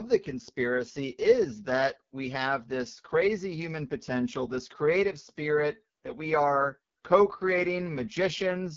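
It's a speech clip run through the AMR wideband (HD Voice) codec the whole way, and badly: there's nothing above about 7.4 kHz, and the voice comes out rough and raspy. That heavy damage points to AMR-WB's lowest rate, around 6.6 kbit/s, where its pulse-driven model struggles.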